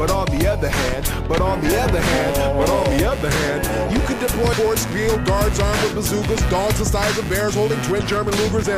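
From 2.04 s to the end at 8.78 s, computer activity noise sits under the sound. It is a buzzy, scratchy chatter that pulses about a hundred times per second. It stays roughly 15 dB below the main signal. Its rhythm does not follow the audio at all. The cause is the computer's changing load, from the processor, graphics card or mouse, disturbing the ground that the audio circuit shares.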